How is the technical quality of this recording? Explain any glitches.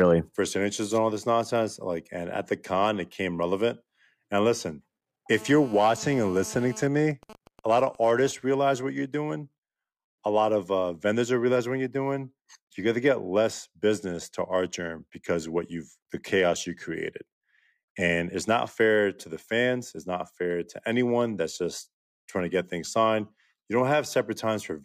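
Two stretches of radio interference from a nearby 2G mobile phone cut into the speech, back to back.

From 5.32 to 6.86 s there is GSM phone buzz, a hard, raspy tone at 217 Hz sitting about 19 dB below the speech. The phone was in a call, transmitting a burst 217 times a second, and the audio circuitry rectified those radio pulses into sound. Unlike mains hum, it is harsh and packed with harmonics rather than smooth, and its 217 Hz rate matches neither 50 nor 60 Hz.

From 6.87 to 8.32 s, ending just before "realize what you're doing", the steady buzz gives way to GSM signalling bursts. While its user was silent in the call, the phone sent only short groups of bursts, which the circuitry again rectified. The result is even ticks with a longer 217 Hz buzz twice a second, around 20 dB below the speech. This broken rhythm, not a continuous tone, separates it from the buzz just before.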